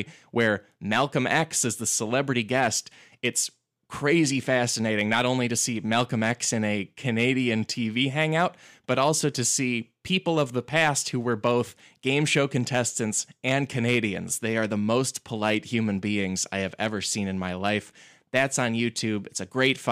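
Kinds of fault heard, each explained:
No faults are heard anywhere in this recording.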